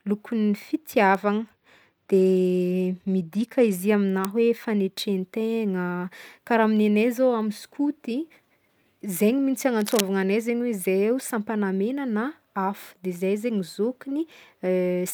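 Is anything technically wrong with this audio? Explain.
Yes, there are three kinds of fault in this speech.

Bit error spikes occur at 1.15, 4.25 and 9.17 s. A flipped bit makes one sample, or two adjacent samples at 1.15 s, jump by a power of two and snap back. Each is heard as a sharp, isolated tick. A waveform shows a lone needle, and a spectrogram a thin vertical line.

A Bluetooth SBC bit pool drop runs from 2.09 to 3.80 s. The encoder appears to have cut its bit pool from 31 to 15, around 105 kbps, so the top sub-bands starve and the rest are coarsely quantised. The voice dulls and turns gritty. A spectrogram shows the treble truncated and smeared.

Cable scratch noise appears from 9.80 to 10.01 s, as dense, irregular crackling only slightly quieter than the speech. It is likely caused by a worn cable or connector shifting, which makes its contact resistance fluctuate rapidly. The waveform shows ragged bursts, and the spectrogram shows broadband speckle.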